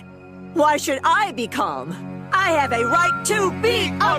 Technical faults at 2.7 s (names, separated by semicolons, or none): loudspeaker feedback squeal